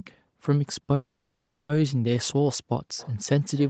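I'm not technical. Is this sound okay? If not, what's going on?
No, there are two problems.

From 0.94 to 1.70 s the speech stalls: the last sound hangs on as a fading buzz, then about 0.4 s of silence, then the talking picks up exactly where it left off. This is a call audio freeze, likely caused by data being held up on its way. Unlike a dropout, where a piece of speech is simply lost, nothing is missing here. The call paused and then carried on a little late.

From 2.97 s to the end there's a feedback echo between two devices: two phones or computers on the same call in one room, one replaying what the other's microphone picked up. You hear faint, thin copies of the speech repeating roughly every third of a second. That steady, evenly spaced repeat is what sets it apart from ordinary room echo, which blurs into a smooth tail instead of repeating.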